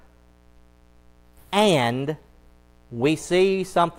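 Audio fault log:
Throughout: mains buzz. A steady, raspy buzz sits under the speech for the whole clip, well below it at roughly 35 dB down. It is built on 60 Hz mains. Sharp switching spikes arrive twice per mains cycle, so the noise is rich in harmonics of 60 Hz. These stack up into the kilohertz range. That gives the tone its rasp rather than a smooth hum. A dimmer, rectifier or missing shield is the kind of source that lets such spikes in.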